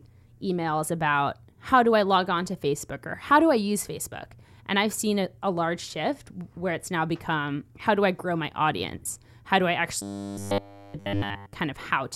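From 10.02 to 11.53 s, new audio likely arrived too seldom, so playback looped a 10 ms stretch throughout while the real speech was skipped. The result is robotic sound from repeated short buffers: a rigid, metallic 100 Hz buzz loosely tracking the speech.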